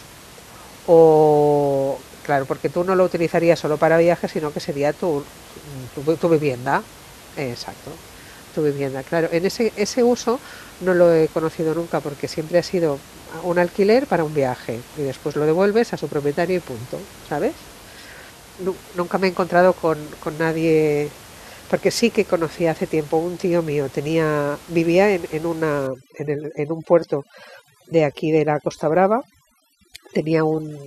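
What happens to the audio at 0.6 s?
Nothing goes wrong at 0.6 s: the speech is intact there, with only the room's own background noise sitting about 23 dB beneath it.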